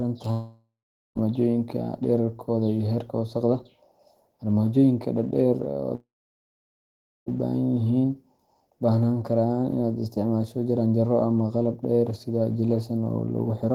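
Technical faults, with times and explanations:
0.31–1.18 s, long network dropout: about 0.84 s of audio is lost. The sound just before it is stretched into a fading buzz, then about 0.43 s of near silence follows before the audio resumes further on. This is likely a gap in packet delivery covered by receiver concealment.
5.95–7.29 s, long network dropout: about 1.32 s is missing. A brief fading continuation gives way to roughly 1.2 s of silence, likely from the same stalled stream.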